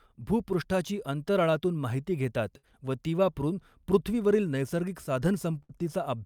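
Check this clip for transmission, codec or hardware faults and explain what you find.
Two bursts of packet loss, at 2.57 to 2.65 s (after "भूपृष्ठाची अंतराळातून माहिती घेतात", before "व ती वापरून") and 5.63 to 5.71 s. The receiver padded each hole by stretching the last sound and fading it, so you get a brief buzz or hiss, then about 60 ms of speech is gone.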